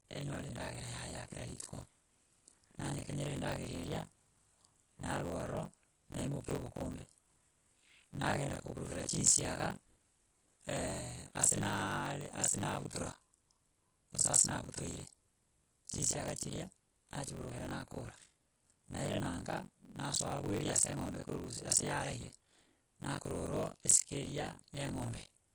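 Running through the whole recording is damage that likely comes from MP3 compression at a low bitrate, around 48 kbps. Short on bits, the encoder has cut the treble and dropped weak spectral detail, so the speech sounds dull, watery and plainly swirly.

Also present throughout is buffer tearing: the writing and reading positions in the playback ring buffer have drifted into each other. Roughly half of each buffer replays audio about 40 ms old, causing a rough, robotic buzz at 46.9 Hz, which fits a 1024-sample buffer, heard only while sound plays.

At 12.89 s there is pre-echo, where the codec spread its noise across a block ending in a sharp attack. The noise meant for the loud onset fills the quiet moment before it, so a brief hiss of about 19 ms precedes the attack and softens it.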